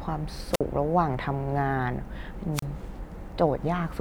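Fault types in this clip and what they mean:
Wireless microphone squelch dropout: the FM radio link weakens until the receiver's squelch gate shuts the output, so the speech drops into near silence with a burst of hiss at the edge of the gap. It happens twice, around 0.52 to 0.61 s with a mute of about 51 ms, and around 2.53 to 2.65 s with a mute of about 31 ms. The hiss at the edge is what sets it apart from a clean digital dropout.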